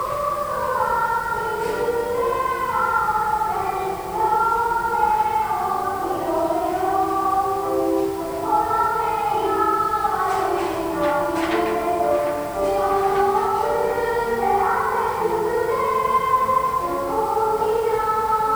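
Grainy, signal-following distortion runs throughout, with quiet passages sputtering or dropping out. The likely cause is low bit depth without dither: about 6 bits, rounded.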